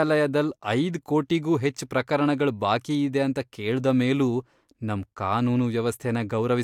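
No dropouts, clicks, distortion or other technical faults are audible anywhere in the recording.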